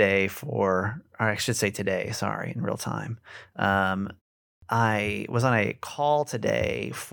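A clipped start after a pause occurs at 4.54 s, where roughly 83 ms of sound is swallowed just before "I was on a". After a pause of about 0.41 s, the playback device drops into a low-power or unlocked state and needs a moment to wake and resync. By the time output resumes at 4.62 s, the onset is already gone, so the phrase bursts abruptly out of silence without its first sounds.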